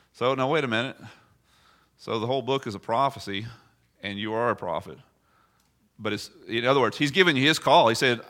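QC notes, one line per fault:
No faults found in this speech clip. Nothing here calls for a QC line.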